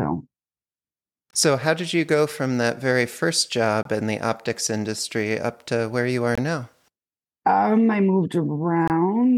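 Four gaps between chunks break the speech at 1.31–1.33 s, 3.83–3.85 s (after "from that very first", before "in the optics industry"), 6.35–6.38 s (after "to where you are") and 8.88–8.90 s (after "I moved"). Each is a 23 ms hard-edged hole, recurring every 2.5 s at each chunk join. Unlike a dropout, nothing is lost: the speech resumes exactly where it stopped.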